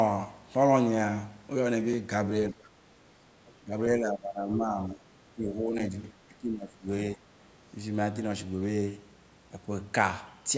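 The clip is speech with three kinds of trouble. First, there are two blocks of digital silence, a tiny dropout at 1.93 s (about 2.6 ms) and another at 5.79 s (8 ms, which fits a 128-sample block). In each, the signal cuts out and straight back with no fade, so you hear a small tick rather than a gap. That likely points to the output buffer not being filled in time.

The bigger issue is speech suppressed in double talk, which hits five stretches: 2.53–2.69 s, 3.60–3.72 s, a long run from 3.98 to 5.93 s, 6.28–6.87 s and 7.15–7.29 s. The talker's level dips by roughly 15 dB in the first three and closer to 20 dB in the last two, so the voice ducks. The likely cause is the echo canceller failing to tell this talker apart from the far-end playback while both were active, and pulling everything down.

Finally, there's some of the other side's voice leaking through, in short scraps at 2.63–2.69 s and 3.46–3.51 s, sitting around 30 dB below the main speech. 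This is likely far-end audio from the loudspeaker that the canceller didn't fully remove from the mic.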